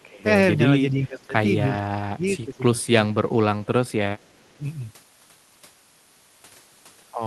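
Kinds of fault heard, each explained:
Echo leak: A delayed copy of the far side's voice returns about 391 ms late, likely because a loudspeaker's echo canceller let some through. It is faint near 0.02 and 4.18 s, stronger from 2.27 to 2.86 s. A spectrogram shows a weaker, time-shifted duplicate of the speech harmonics.
Speech suppressed in double talk: While both sides spoke, the talker's level sank by up to roughly 20 dB across about a second between 0.91 and 3.17 s, and by roughly 10 dB around 3.82 to 4.64 s. This is likely an echo canceller ducking everything. The waveform shows sudden envelope dips.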